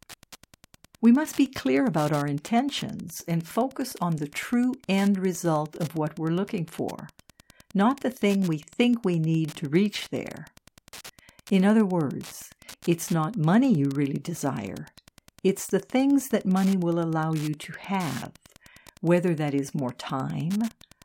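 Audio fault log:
throughout, Wi-Fi interference: a steady, fine ticking runs under the speech for the whole clip, repeating just under ten times a second at a 102.4 ms spacing and sitting about 25 dB below the speech. A nearby Wi-Fi radio is sending its regular beacon bursts, and the audio circuitry picks up and rectifies that radio energy. Each burst turns into a brief click, so the beacon's fixed interval becomes this even, clock-like tick.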